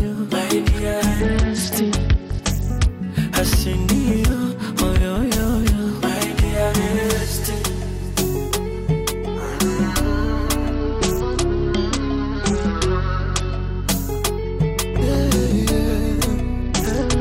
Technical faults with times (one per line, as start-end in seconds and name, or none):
1.20-2.89 Bluetooth SBC bit pool drop
10.72-13.86 Bluetooth SBC bit pool drop
16.62-17.21 Bluetooth SBC bit pool drop